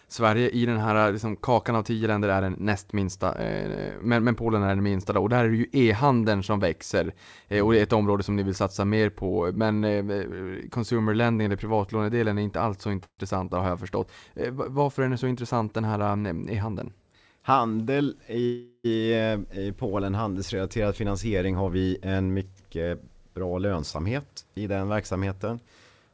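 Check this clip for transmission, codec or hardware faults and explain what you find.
Two kinds of network-timing fault are audible in this speech, both arising in a call path whose band stops at 8 kHz, which fits G.722 at 64 kbps.

Call audio freeze, at 13.04–13.20 s and 18.45–18.86 s. The likely cause is packets stalling in transit until the jitter buffer ran dry, so the receiver kept extending the last sound. After "är inte alls så" a fading buzz of about 0.16 s, ending in roughly 80 ms of silence, holds the speech before "har jag förstått" resumes intact. The second freeze stretches about 0.39 s, with only a brief silent moment. Nothing is lost, but each one adds delay.

Jitter buffer speed-up, at 15.26–16.61 s and 20.84–21.67 s. After late packets arrived in a burst, the buffer held more audio than its target, so the receiver trimmed pitch-period-sized slices repeatedly to catch up. 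Right after "varför är den så" the speech runs at 110% speed, shedding roughly 0.15 s. Just before "vi en mycket bra" it runs at 109%, losing about a tenth of a second. The pitch stays unchanged while the delivery sounds hurried.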